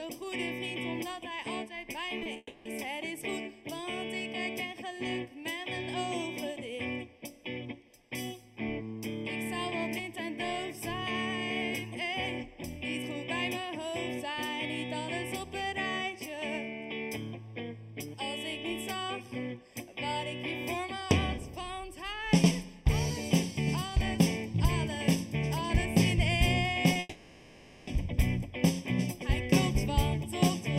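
Throughout the clip, one channel runs a fraction of a millisecond late and the two are summed to mono. That channel delay causes comb filtering, cancelling evenly spaced frequencies from around 1.5 kHz upward, so the whole sound is hollow and phasey with fixed notches.

At 2.19, 2.23 and 2.33 s, short concealed packet loss leaves 20 ms holes that the receiver patches by extending the preceding sound. Each shows up as a brief smear or wobble. The same happens again at 26.93 s.

From 2.37 to 2.67 s, audio most likely stopped arriving in a long network dropout. The receiver stretches the last sound for about 0.28 s as a fading buzz or hiss, then leaves a short gap of silence before the real audio resumes with the lost part missing. A longer dropout, likely from the network as well, runs from 26.99 to 27.89 s. There the filled tail lasts about 0.88 s and rejoins the audio with no silent gap.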